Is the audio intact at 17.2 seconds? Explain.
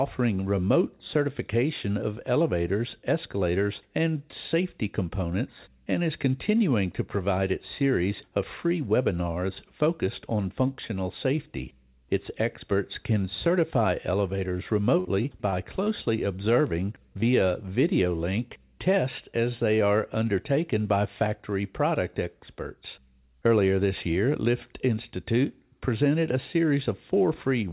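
No. At 17.21 to 17.24 s there is a short concealed packet loss: about 20 ms of the call arrived too late, and the receiver bridged it by extending the preceding sound before blending back. The result is a brief smear or wobble, not the dead silence of an unconcealed dropout.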